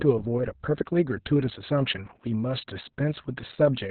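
Throughout the clip, Opus voice compression runs its SILK coder in narrowband mode at a very low rate, consistent with about 6 kbps. Nothing survives above 4.2 kHz and the excitation is coarsely coded, so the speech sounds heavily muffled, hoarse and slightly robotic.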